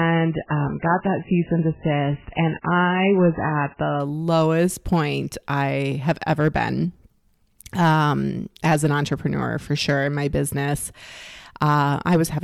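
For the first 4 s the speech is muffled and watery, with nothing above 3 kHz, and then it jumps to full, clear treble without a gap just before "lowest point I have". This is an adaptive stream starting at a low bitrate: the player began on a very low-bitrate version to start fast, then switched to a much higher one once it had gauged the connection.

Throughout the clip, the louder syllables carry a brittle crackle on their peaks. This is hard clipping: the signal was driven about 6 dB past what a stage could pass, so a small fraction of the peaks were cut flat, adding harsh upper harmonics.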